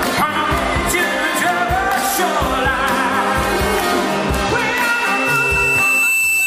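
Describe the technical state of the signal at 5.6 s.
At 5.6 s a loudspeaker feedback squeal is sounding. It starts at 4.08 s and runs to the end. A microphone is picking up its own loudspeaker, and the loop gain exceeds one at 2.7 kHz. That tone swells over about two seconds to roughly the signal's level.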